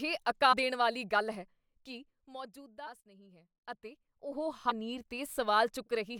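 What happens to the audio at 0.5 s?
At 0.51 to 0.54 s there is damaged data in the compressed stream. The decoder misreads the corrupted frames, loses sync and hunts for the next valid frame header, producing a brief glitch in the speech, heard as a chirp, squawk, click or short hole.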